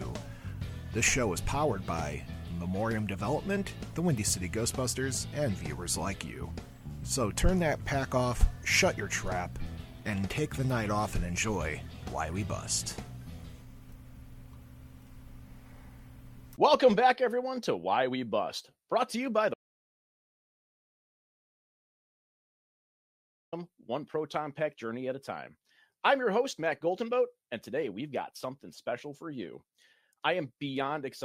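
At 19.54 s the sound cuts off into total silence, with no room tone, until 23.52 s; this audio dropout to silence likely came from a lost input feed.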